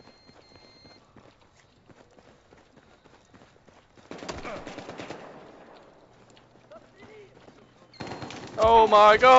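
Nothing is technically wrong with the clip, and no faults can be heard at any point in the audio.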